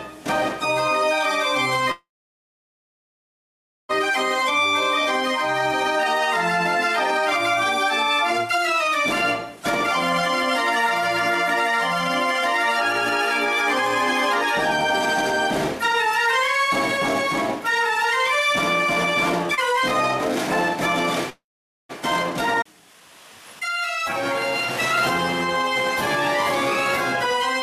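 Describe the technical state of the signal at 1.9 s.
At 1.91 s a call audio freeze begins and lasts until 3.91 s. The sound stops advancing, and for roughly 150 ms a fading continuation of the last sound is heard. Silence follows for about 1.8 s, until the stream resumes exactly where it left off. Nothing is lost, but everything after is pushed about 2 s later. The likely cause is packets held up in transit, leaving the jitter buffer empty. On a waveform this shows as a short decaying tail followed by a flat line. On a spectrogram it appears as a smeared, fading band and then a blank column.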